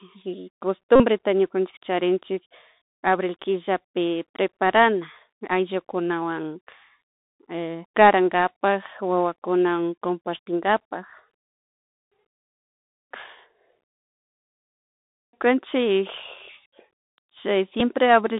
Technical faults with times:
0.00-18.40 Bluetooth CVSD headset codec
0.96-1.03 Bluetooth headset packet repeated
17.80 Bluetooth headset packet repeated

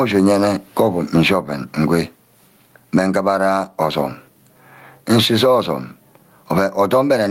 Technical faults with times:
0.00-7.31 gain pumping

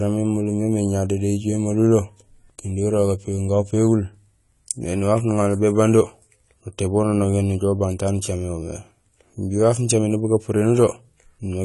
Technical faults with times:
0.00-11.65 AAC compression

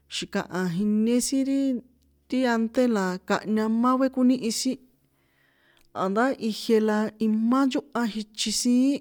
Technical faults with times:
none

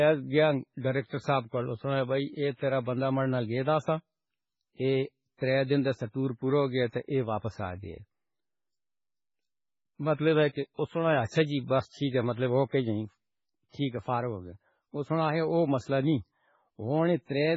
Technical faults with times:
0.00-17.57 MP3 compression

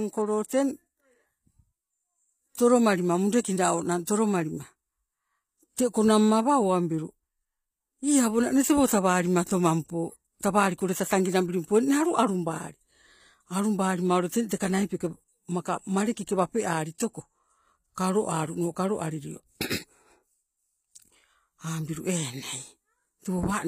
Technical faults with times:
0.00-23.67 HE-AAC compression

